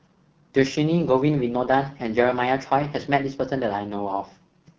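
The speech sounds rough and raspy for the whole clip, with a buzzy, gritty edge and a top end that seems synthetic rather than natural. That is heavy AMR wideband (HD Voice) codec damage. The coarseness points to one of the codec's two lowest rates, likely 6.6 kbit/s. At that rate the pulse-driven vocal tract model below 6.4 kHz is coded too crudely, and the band above it is only filled with shaped noise.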